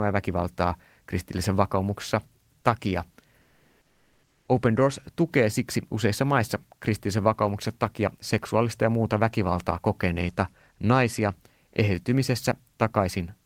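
From 3.41 to 4.47 s, the real background gives way to comfort noise for about 1.06 s: a steady, featureless hiss, roughly 46 dB below the loudest passages and about 2 dB off the surrounding level. It likely comes from discontinuous transmission, as in Opus DTX. Unlike a dropout, no speech is lost here. Only the background texture is replaced.

At 11.73 to 11.75 s, just after "muuta väkivaltaa kokeneita naisia", sound is dropped by the voice detector. About 10 ms of the trailing speech vanishes into 20 ms of synthetic noise, most likely from the detector treating the word ending as background. What sets it apart from the earlier fault is that actual speech, not just background, is cut.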